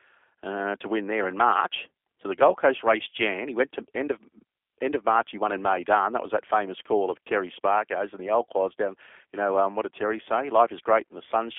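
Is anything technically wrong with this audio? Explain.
Yes. Throughout, the speech sounds rough, slightly synthetic and boxy, with nothing above about 3.7 kHz, which points to the G.729 codec at a rate that fits 8 kbit/s. It rebuilds each short frame from a vocal tract filter, pitch predictor and a few pulses, within a 300 Hz to 3.5 kHz line band.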